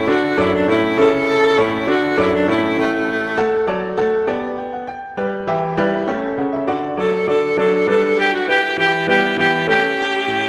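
Nothing stood out as a fault on listening to this audio.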